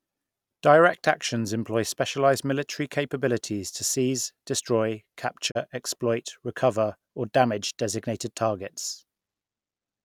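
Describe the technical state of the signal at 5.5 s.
At 5.50 to 5.57 s, just after "capabilities to seize destroy", a digital broadcast dropout mutes the speech after a 20 ms fade, fitting one failed frame; the waveform flattens and the spectrogram shows a blank vertical gap.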